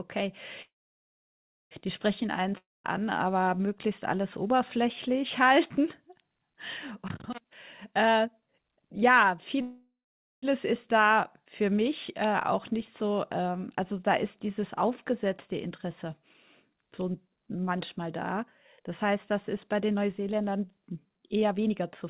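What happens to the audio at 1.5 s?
At 1.5 s the sound is in a call audio freeze (0.62 to 1.74 s): a brief fading fill, then about 1 s of silence, likely from a starved jitter buffer. Playback then resumes where it stopped, so unlike a dropout, nothing is lost.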